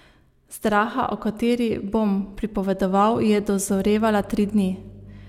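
Mains hum enters at 3.68 s and runs to the end: a ground loop or nearby transformer leaks the 50 Hz power line in, a steady low drone around 20 dB below the speech.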